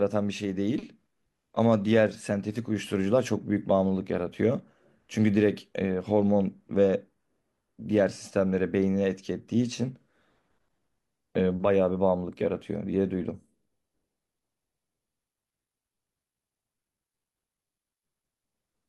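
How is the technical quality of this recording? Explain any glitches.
Nothing in the recording stood out as a technical problem on listening, so there are no glitches to explain.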